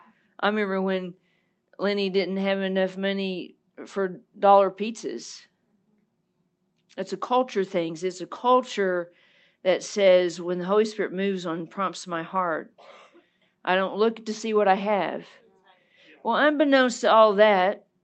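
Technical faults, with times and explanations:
No technical faults can be heard in this speech.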